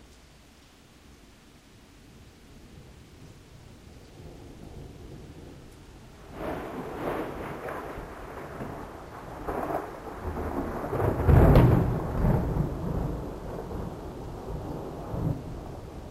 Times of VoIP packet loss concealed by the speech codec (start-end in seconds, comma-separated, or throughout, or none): none